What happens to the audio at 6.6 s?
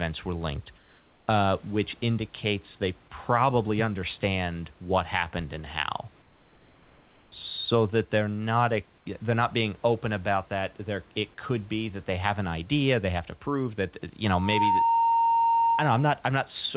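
From 6.22 to 7.32 s the room's background turns into a steady, featureless hiss about 2 dB quieter, likely comfort noise in place of the background during a transmission pause.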